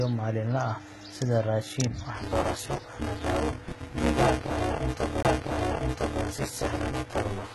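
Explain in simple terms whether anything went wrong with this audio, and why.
Several things went wrong. Throughout the recording, the speech has gritty, lispy s sounds and nothing at all above about 11.8 kHz. That is likely HE-AAC compression at a heavy setting, which keeps the low part of the sound and fakes the treble by copying lower bands upward.

From 2.16 s to the end, a robotic buzz at about 188 Hz rides on the speech. This is buffer tearing: the software filling the audio buffer and the hardware playing it got out of step, so roughly half of each chunk repeats sound from about 20 ms earlier. That fits a 256-sample buffer.

Between 5.23 and 5.25 s there is a tiny tick and a brief silence of about 20 ms, and then the sound resumes from a different point. This is a CD skip: the laser jumped to another turn of the disc and the player picked up from there.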